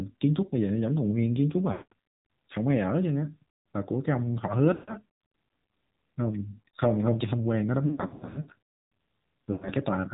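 Throughout, the speech passes through the AMR narrowband mobile codec. Nothing above 4 kHz survives, and the buzzy, synthetic texture points to a low AMR-NB mode near 7.4 kbps, where sparse pulse excitation cannot fully rebuild the voice.

Lost AMR speech frames occur at 1.72–1.93 s, 4.74–4.94 s, 7.86–8.49 s and 9.52–9.70 s. With each loss, the decoder repeats the last pitch and vocal-tract settings at falling gain. The first two gaps, about 200 ms and 140 ms, stretch the sound and fade it toward silence. The 7.86 s stretch scatters short dropouts, none longer than 80 ms, into a choppy warble. The final 100 ms gap draws the sound out and fades it, and the speech returns rough after each gap.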